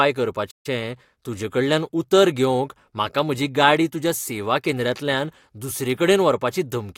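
At 0.50 s the speech cuts to silence in mid-flow. This is a playback stall. The gap lasts about 138 ms, ending at 0.66 s, and then speech resumes with "तूजेकडल्यान उतर घेवंक म्हाका". The player likely ran short of data or was briefly blocked.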